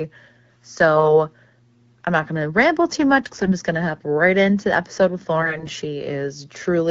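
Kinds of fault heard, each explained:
AMR bit errors: flipped, less-protected frame bits turn the speech briefly hoarse and gargly. Unlike packet loss, pitch and level carry on without gaps.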